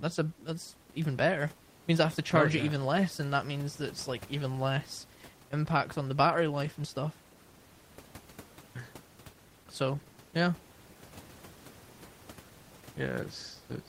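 A speech recording with nothing technically wrong with it, the room noise sitting about 22 dB below the voice.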